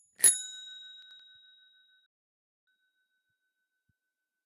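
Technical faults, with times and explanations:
1.02–1.20 s, chunks out of order: two adjacent blocks of about 85 ms play in swapped order, so the sound jumps back and forth. The waveform shows three abrupt joins, and the spectrogram shows vertical broadband lines where the textures fail to connect.
2.06–2.67 s, digital broadcast dropout: the sound fades out in about 3 ms and is then muted for roughly 0.6 s before returning mid-flow. The length fits the loss of a run of 32 ms frames. The waveform is flat and the spectrogram is an empty gap, with no tail bridging across.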